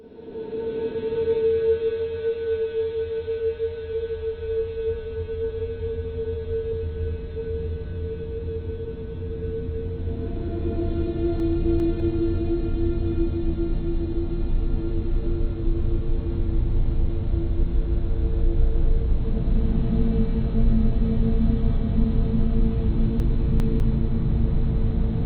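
At 11.4 to 12.0 s and again at 23.2 to 23.8 s, the chunks are out of order. In each case a 200 ms block of audio was delivered late and played after the two blocks that should have followed it. Nothing is missing, but the 0.6 s span plays in the wrong sequence, with three abrupt joins where unrelated stretches of sound butt together, so the sound jumps and briefly turns jumbled.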